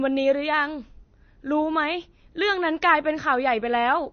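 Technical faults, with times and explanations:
Throughout, MP3 compression: the encoder likely ran short of bits, a starved bitrate that fits roughly 32 kbps, so it cut the treble at a fixed point and left nothing above 6.4 kHz, dulling the speech and blunting s sounds. With so few bits, weak frequency lines drop out and return from frame to frame, giving the plainly audible watery, swirling texture and smeared consonant attacks across the whole recording.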